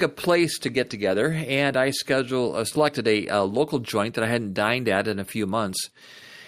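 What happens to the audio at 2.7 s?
Around 40 ms of the speech stream never reached the decoder in time, so between 2.67 and 2.74 s the receiver masked the gap with short concealed packet loss, extrapolating the preceding sound and blending back, which leaves a brief smear or wobble.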